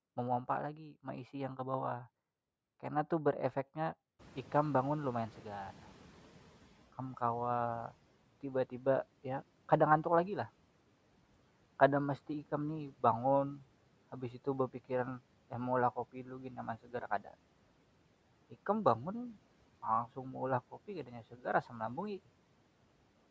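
At about 4.0 s the room noise rises by about 22 dB, and from 4.19 s the noise suppressor lags in catching up. The noise passes at first, then sinks by about 10 dB over 2.68 s, to 6.87 s. A spectrogram shows a broadband band below 8 kHz gradually dimming.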